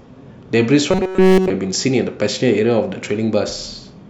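From 0.91 to 1.50 s the speech collapses into robotic sound from repeated short buffers, a rigid metallic buzz at 188 Hz. The likely cause is starved playback looping a roughly 5 ms slice throughout this stretch, skipping the real audio.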